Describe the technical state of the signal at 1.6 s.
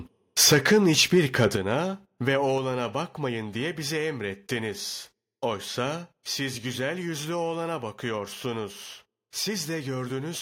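At 1.56 s the level of the speech and the background falls in a single step of about 7 dB, a microphone volume stepped down event. The likely cause is the call software judging the input too hot and lowering the device's input volume at once, rather than fading it. On a waveform the envelope narrows abruptly at that point and stays narrower. On a spectrogram every frequency band darkens together along one vertical edge.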